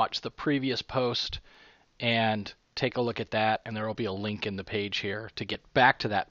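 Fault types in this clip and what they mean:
Overlap between stream segments: adjacent segments carry time stamps that claim the same stretch of time, so the player discards the overlapping part even though that sound was never duplicated, and a short piece of the waveform is simply lost. Here the join lands roughly every 2 seconds, matching 2-second segments, and each splice removes around 10 to 20 ms, producing a small click or skip at 1.54, 3.56 and 5.54 s.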